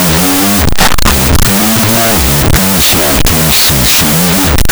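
Speech, heard throughout under loud harsh noise at half speed and an octave low. The cause is a wrong sample width: 16-bit data read as unsigned 8-bit turns every byte into a sample. Unlike a byte-order swap, the speed and pitch change too.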